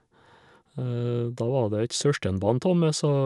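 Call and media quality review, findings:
No faults found in the speech recording. Nothing heard calls for further investigation.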